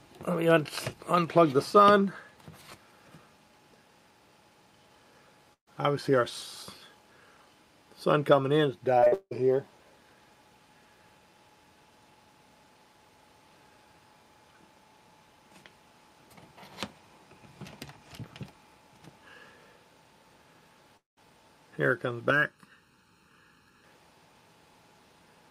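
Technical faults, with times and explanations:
5.53–5.69 s, burst of packet loss: about 140 ms of audio failed to arrive in time, and the receiver extended the last sound for roughly 130 ms while fading it. About 100 ms of that is silent before the sound picks up further on, with the intervening portion gone.
8.99–9.33 s, repeated packet loss (robotic sound): four separate gaps, the longest 172 ms, removed about 280 ms in total. Each hole was patched by continuing the previous sound, so roughly three quarters of this span is concealed audio, heard as choppy fragments.
20.97–21.19 s, long network dropout: about 200 ms went missing. The receiver carried the last sound forward as a fading buzz or hiss, and roughly 150 ms of it is silence before the audio resumes without the lost portion. This is likely a network dropout.
22.30–23.84 s, channel delay (comb filtering): one channel lags the other by under a millisecond, and the two are summed to mono. 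Shared content cancels at evenly spaced frequencies starting near 700 Hz, so the sound turns hollow and phasey.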